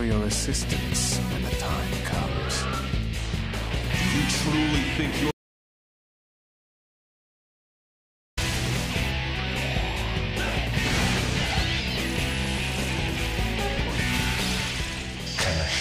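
At 5.31 s an audio dropout to silence cuts the sound abruptly to silence, with no room tone, until 8.37 s, likely from lost input while recording continued.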